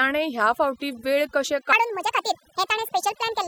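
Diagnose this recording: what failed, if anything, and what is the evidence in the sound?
Overdone noise removal runs through the whole recording. The background is pulled to near silence, with twinkling specks where the noise floor used to be. The stage is noise suppression in the processing chain. It was set too aggressively. Frequency bands close to its noise estimate were cut hard or switched off. Quiet parts of the speech fell under that threshold and were removed with the noise.

A section at the wrong speed begins at 1.73 s, right after "ह्या फावटीं वेळ कशे", and lasts to the end at 3.47 s. From that point the speech is hurried and high. It plays about 1.66 times too fast. The pitch rises by roughly ten semitones. Speed and pitch move together, so this is not a pitch-shift effect. The likely cause is a playback or editing stage running that segment against the wrong clock.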